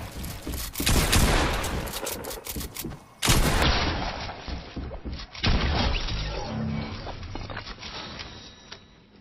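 At 3.62 s the audio switches abruptly, with no gap, to an adaptive stream at a lower bitrate, and it stays degraded to the end. The connection evidently slowed, so the player fetched a cheaper encoding. Treble vanishes above 5.8 kHz, leaving the sound dull and swirly with codec artefacts. This fits a fall from roughly 128 to 24 kbit/s MP3. On a spectrogram the upper band is cut off cleanly at that instant, while the waveform shows no break.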